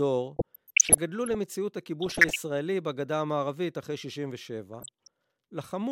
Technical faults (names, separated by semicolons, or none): DAB burbling